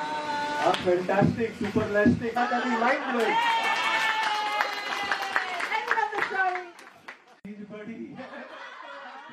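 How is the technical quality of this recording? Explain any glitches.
One glitch stands out: at about 2.33 to 2.38 s the sound jumps abruptly forward with a brief blip. This is likely a stream segment skipped: one chunk failed to load and playback resumed at the next. Unlike a dropout, which leaves a silent gap, the audio doesn't resume where it stopped.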